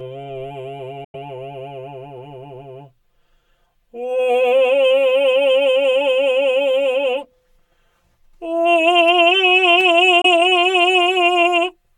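Music, with a hollow, phasey tone from start to finish. That is channel delay (comb filtering). One channel runs roughly 5 ms behind the other, and the two are summed to mono. Content shared by both channels cancels at evenly spaced frequencies, starting around 100 Hz. The result is fixed notches that give the whole mix a hollow, tubular colour. The notches do not move, so the coloration stays constant over the full clip.

The sound cuts out from 1.04 to 1.15 s. It drops out again from 10.21 to 10.26 s. Each gap is near-total silence. The music then returns further along, as if it had kept playing underneath. This is a Bluetooth dropout, likely from audio packets arriving too late for the headphones and being discarded. The first hole of about 93 ms fits roughly four lost frames. The second, about 23 ms, fits a single one.

At 9.80 s a sharp snap sits on top of the music. It is very short and does not interrupt the underlying sound. 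That marks an electrical switching spike, likely a nearby switch, motor or static discharge arcing and being picked up by the audio line. It is a brief added transient, not a gap, which separates it from the dropouts either side of it.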